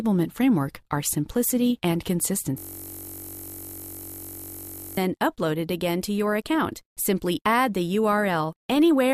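A system hang loop runs from 2.58 s to 4.97 s: the computer or its audio driver stalled, and the sound hardware kept replaying the last block left in its ring buffer. That block is only 21.33 ms long, which fits a 1024-sample buffer, so it repeats over a hundred times at about 46.9 Hz. The result is a steady, mechanical buzz pitched at the loop rate, replacing the real audio until playback recovers at 4.97 s.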